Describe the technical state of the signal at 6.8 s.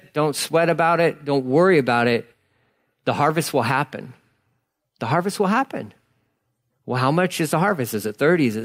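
At 6.8 s the speech signal is intact, with no fault audible at that moment.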